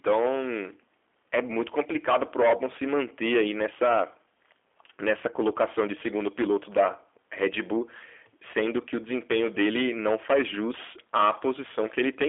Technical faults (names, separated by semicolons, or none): hard clipping; G.729 codec